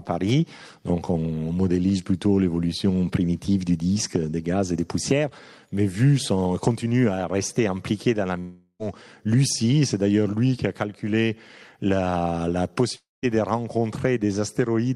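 At 8.39 s the sound breaks into a fading buzz that lasts about 0.4 s, then goes silent until 8.82 s. At 12.95 s it happens again, fading for about 0.27 s before silence, with playback resuming at 13.26 s. In both gaps the missing audio never returns. This is likely a long network dropout: packets stopped arriving, and the receiver stretched the last sound until it ran out.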